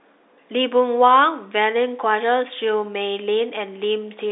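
Speech, with nothing technically wrong with it, carried over a G.711 telephone line that passes nothing above about 3.8 kHz.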